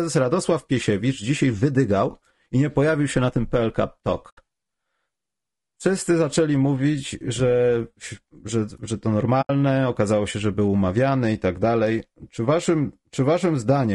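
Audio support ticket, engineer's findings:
Low-delay AAC compression, likely AAC-ELD at a rate consistent with about 32 kbps: short frames resolve pitch harmonics poorly, too few bits to fill them. Speech plainly rough and grainy throughout, noise between harmonics, lowered or synthetic top band.

AAC frame loss with muting, 4.29–4.38 s and 9.41–9.50 s (the latter after "że że to", before "okazało się że był"): decoder zeroed missing spectrum, roughly 80 ms each, fitting four lost frames. Overlapping windows fade out and back in, leaving soft-edged holes.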